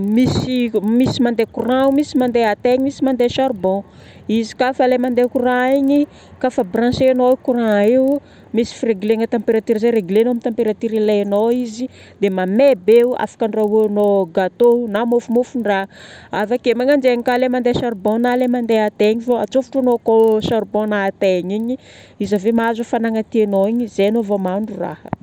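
Throughout the speech, an evenly spaced ticking rides on the sound at 25 per second, a rough buzz that fades out whenever the speech pauses. This is a resampler restarted on every block: each 40 ms block was converted on its own, apparently from 24 kHz up to 48 kHz, so every block edge lacks its true neighbouring samples and carries a small error. Unlike mains hum, it stops in silence, and unlike dropouts, no audio goes missing.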